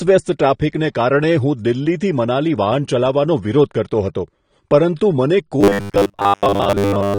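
A speech recording with two audible faults. Throughout, the sound is dull and smeared, with a fizzy, warbling texture on sibilants and held vowels. This is plainly audible AAC compression damage, likely from AAC-LC at a low bitrate, around 32 kbps. At that rate the encoder pulls its cut-off down and quantises the remaining bands coarsely, leaving gaps or noise-like fill in the spectrum. From 5.61 s to the end of the clip, the speech turns into a rigid, metallic buzz at 100 Hz that only loosely tracks the original. This is robotic sound from repeated short buffers. The likely cause is audio arriving too slowly, so the playback side keeps replaying the last short block instead of waiting. A 100 Hz buzz fits a block length of about 10 ms being looped. Around 70 percent of the underlying audio in that stretch is replaced by repeats rather than heard.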